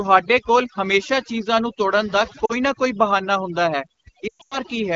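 Speech carried over an AMR wideband (HD Voice) link, whose light coding fits a mid-rate setting around 12.65 kbit/s. Throughout, overdone noise removal pulls individual frequency bands far down whenever they sit near the estimated noise floor, taking quiet voice detail with them. The background drops and breaks up into twinkling specks, and a spectrogram shows an empty floor dotted with isolated bright islands. Lost AMR speech frames appear at 2.45 to 2.53 s, a 40 ms gap where the decoder reuses the last good pitch and vocal tract settings at falling gain, so the sound drops to near silence within two frames. From 4.28 to 4.59 s, about 220 ms of loss is scattered over 240 ms, with a longest run of 120 ms, so the sound drops to near silence, then returns weak or rough. The waveform shows a shrinking envelope there, and the spectrogram shows a frozen, blurred harmonic pattern.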